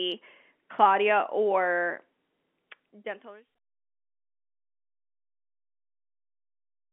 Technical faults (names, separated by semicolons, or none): none